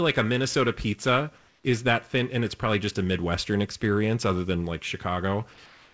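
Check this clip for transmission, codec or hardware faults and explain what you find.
Comfort noise in place of the background shows up twice in this speech clip: from 1.38 to 1.64 s and again from 5.66 s to the end. In both pauses the natural background drops out and a smooth, textureless hiss takes over, about 1 dB quieter. The likely cause is discontinuous transmission: the sender went quiet when it detected no speech, and the receiver filled the gap with synthetic noise roughly matched to the background. Above 8 kHz there's nothing at all, which fits a G.722 wideband call codec.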